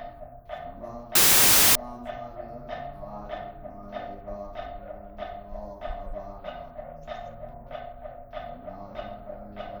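From 1.15 to 1.75 s there is a wrong sample width fault, consistent with 32-bit samples read as 16-bit. Mismatched byte pairs give loud noise burying the sound, at half speed and an octave low. Spectrograms show bright broadband smear; the waveform jumps to dense loud hash.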